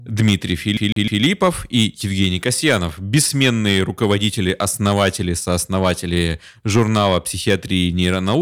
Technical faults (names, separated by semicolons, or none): hard clipping; CD stuck on one turn